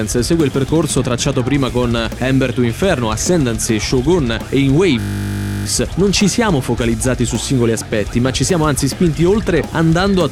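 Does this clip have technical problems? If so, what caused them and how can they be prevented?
Yes, there's a system hang loop from 5.0 to 5.66 s. The system stalled while the sound hardware kept replaying one 20 ms slice of its buffer, about 33 times, so you hear a steady 50 Hz buzz. Little or no audio seems lost. To prevent it, keep the audio thread from being starved by running it at high priority and using stable drivers.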